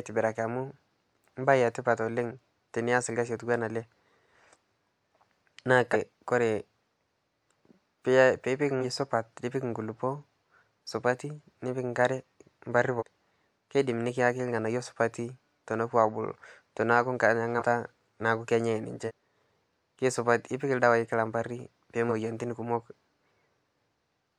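Jumps at 5.92, 8.80, 12.98, 17.58, 19.07 and 22.08 s mark compressed frames skipped. Missing or rejected frames make the speech jump ahead, losing roughly a fifth of a second at 5.92 s, a tenth at 8.80 s, about half a second at 12.98 s, 0.15 s at 17.58 s, and a fifth of a second at 19.07 and 22.08 s.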